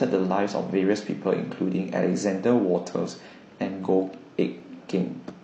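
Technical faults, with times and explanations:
4.60 to 4.64 s, overlap between stream segments: two segments claimed the same stretch of time, so the player trimmed about 40 ms of speech that was never actually duplicated. The waveform jumps straight across the gap, which you hear as a small click or skip.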